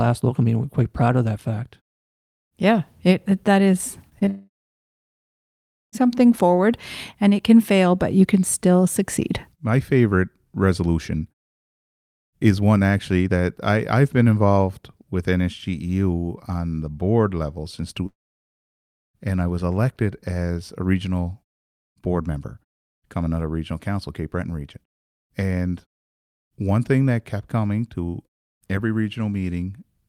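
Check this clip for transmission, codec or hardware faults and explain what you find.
Two network faults turn up, bunched around the four-second mark with another at eighteen seconds.

Short concealed packet loss hits right after "it it that is", at about 4.09, 4.19 and 4.25 s. Each time around 20 ms of speech didn't arrive, and the receiver patched the gap by extending the last sound before blending back. You hear brief smears or wobbles in the speech.

A long network dropout follows straight on, from 4.29 to 5.95 s, and there's a second from 18.07 to 18.88 s. In each, the audio briefly trails off as a fading buzz or hiss, then goes silent for about 1.35 s the first time and about 0.72 s the second. That's likely a stretch of packets lost in transit, roughly 1.6 s and 0.8 s of speech gone. The first resumes at "forward and it can", with the missing part simply skipped. The fade-outs in the natural pauses are just normal muting, not part of the fault.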